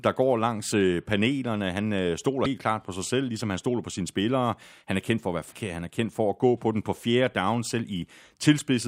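At 2.41 to 2.46 s, just before "klart på sig selv", and at 5.49 to 5.54 s, after "kendt for at være", damaged data in the compressed stream makes the decoder misread frames and lose sync. Each event is a brief disruption.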